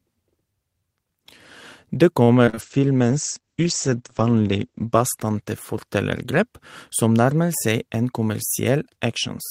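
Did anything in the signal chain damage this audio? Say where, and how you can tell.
Yes. From 2.23 to 2.59 s there is repeated packet loss in the network stage, heard as robotic sound. Four short holes, the longest about 42 ms, are each patched by extending the previous sound, so roughly a third of that stretch is synthetic fill. The choppy stutter with pieces missing sets it apart from codec coarseness: the damage arrives as discrete gaps rather than a continuous loss of quality.

Right after, from 2.62 to 5.94 s, a call bitrate drop degrades the codec stage. The encoder fell from 32 to 12 kbps, staying at the lowest rate for about 2 s, and the audio bandwidth shrank from 20 kHz to 8 kHz. That makes the speech sound muffled and watery, but continuously so, with no dropouts or repeated fragments. The steady dullness and loss of top end distinguish it from the packet-loss stretch before it.

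Between 8.02 and 8.69 s a jitter buffer speed-up in the receiver's buffering shortens the audio. Short pitch-period chunks totalling about 50 ms were cut out, so the speech runs at about 106% speed and sounds hurried. The pitch stays where it was, which rules out a sample-rate mismatch or resampling error, since those would shift pitch and tempo together.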